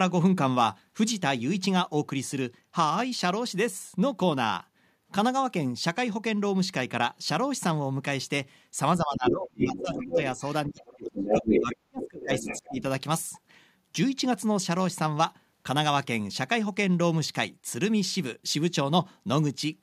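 From 9.02 s to 12.83 s the talker's speech is suppressed in double talk: across roughly three seconds within that span the voice sinks, at its deepest by around 30 dB, in broken stretches. This is likely the echo canceller, faced with both sides speaking at once, failing to tell its own talker from the loudspeaker echo and pulling everything down. On a waveform the envelope collapses into ragged gaps; a spectrogram shows the talker's harmonics fading or vanishing in patches.

Over the same window the other side's voice leaks through, from 9.26 s to 10.52 s and again from 10.83 s to 12.83 s, at roughly the same level as the talker. The likely cause is that the far-end voice played on the loudspeaker was not fully removed from the microphone signal. A spectrogram shows a second, unrelated set of harmonic tracks overlapping the first, with no drop in loudness on the waveform to set it apart.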